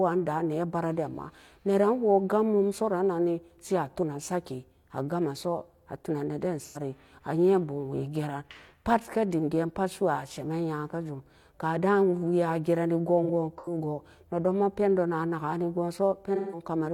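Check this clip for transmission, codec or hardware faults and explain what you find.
AAC frame loss with concealment occurs at 6.64 to 6.78 s (just before "kee a yen bum"), scattered across 13.24 to 13.77 s, and at 16.35 to 16.63 s. The decoder rebuilds missing frames from the last good spectrum, so each loss, 85 to 171 ms in total, sounds smeared, noisy or phasey.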